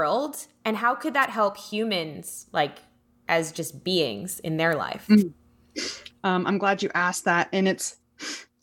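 Two wireless microphone noise hits break into the speech, at 1.21 to 1.26 s, after "and how could" and before "help humans like as", and at 5.17 to 5.23 s, after "beings in their life". Each is a brief swish of static where the FM radio link fades and receiver noise rises.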